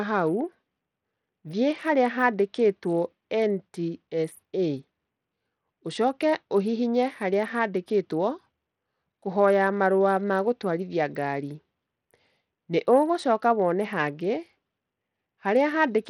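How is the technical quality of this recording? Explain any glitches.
The recording has plainly audible codec damage across its whole length, consistent with Bluetooth SBC compression.

Throughout the speech, the treble thins and flickers while a gritty, grainy noise clings to the voice. The likely cause is SBC's coarse, simple sub-band allocation starving the upper bands, which fits a rate around 80 kbps. Unlike MP3's swirly, watery artefacts, this is harsher, with rough aliasing.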